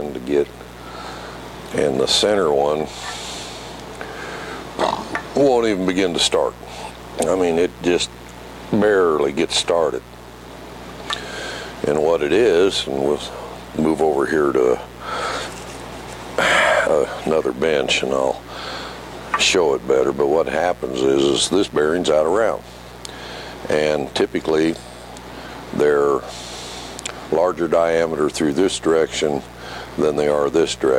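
Switching spikes from the 60 Hz mains are leaking into the signal path, likely through a dimmer, rectifier or missing shield. The result is mains buzz throughout: a steady, raspy buzz with harmonics reaching into the kilohertz range, sitting roughly 20 dB below the sound.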